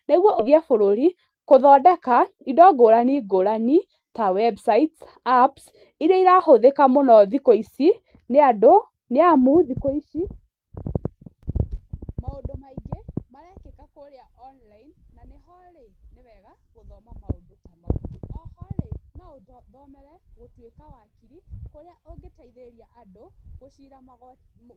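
At 0.39 s the receiver threw away a stretch of speech, around 0.4 s of it, while later audio was already queued, so it could catch up. That is a skip ahead: playback leaps forward with no silence, and the two sides butt together abruptly.

From 0.50 s to 2.73 s, a jitter buffer speed-up follows. The buffer still held more than its target, so the receiver repeatedly cut out pitch-period-sized slivers, around 150 ms in total. The speech runs about 7% fast at unchanged pitch and sounds rushed.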